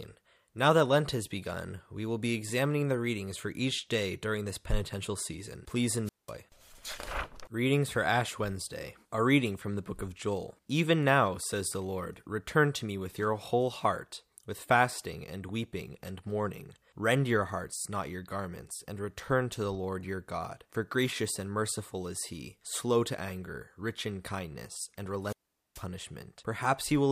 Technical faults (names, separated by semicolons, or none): wireless microphone squelch dropout